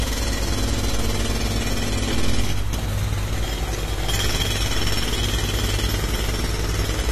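Throughout the clip the sound is dull and smeared, with a fizzy, warbling texture, most likely from AAC compression at a low bitrate, which fits about 32 kbps. A spectrogram shows a hard ceiling at 13.5 kHz.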